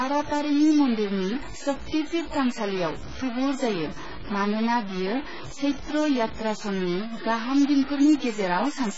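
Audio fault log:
throughout, stuck bit: One bit of the sample data is likely held fixed, so about half the values land off by that bit's weight in a waveform-dependent pattern. The speech picks up distortion, and pauses fill with a steady noise floor.
throughout, AAC compression: Heavy AAC-LC coding at a rate that fits roughly 12 kbps is the likely source of the damage. Nothing remains above 7.6 kHz, so the speech sounds dull and smeared, with a warbling, fizzy texture on sustained sounds and sibilants.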